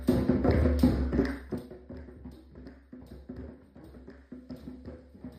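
Zipper noise from 1.37 to 1.71 s: the level falls about 20 dB in unsmoothed 2 dB steps, around thirty a second, each clicking.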